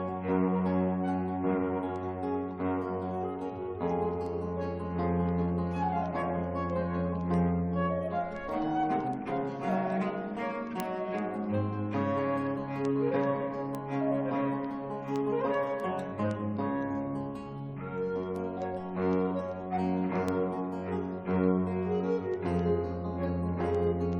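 Running from about 0.17 s right to 24.13 s, the audio has word clock ticks: sharp clicks at a steady rate, roughly every 0.15 s, so somewhere around two hundred over the clip, with their strength varying from one to the next. The sound points to a digital link read by a device on its own free-running clock, about 200 ppm off the sender's, slipping a single sample each time the two clocks drift past each other.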